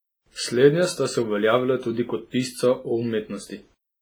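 Throughout the speech the sound is washy and ringing, with a hiss that breathes with the signal and faint detail missing. This heavy damage is likely WMA compression: long transform blocks smear coarse quantisation noise, and the thinness fits a bitrate near 24 kbps.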